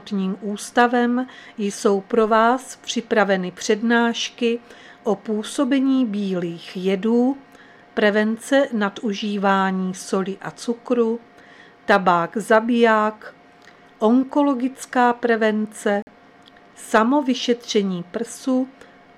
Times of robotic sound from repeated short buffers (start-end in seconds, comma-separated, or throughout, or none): none